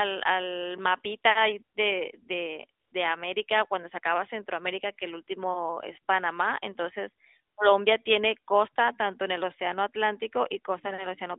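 A speech clip carried over a narrowband mobile link, with the band limited to roughly 200 Hz to 3.7 kHz and light codec colouring consistent with 12.2 kbps AMR-NB. It shows AMR comfort noise twice: at 2.80 to 2.92 s for 120 ms, and at 7.54 to 7.58 s for 40 ms. In each pause the sender stopped transmitting speech frames, and the receiver filled the gap with smooth synthetic noise. Unlike a dropout, the gap is not dead silence but a steady hiss replacing the real background.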